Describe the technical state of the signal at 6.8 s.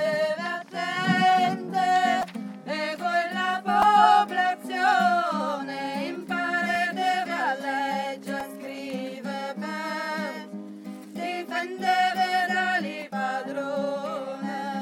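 A repeated buffer occurs at 6.75 s. New audio failed to arrive in time, so the device replayed its last block once more. The repeated piece lasts about 2.9 ms, which fits a 128-sample buffer, and the hard join makes a brief click.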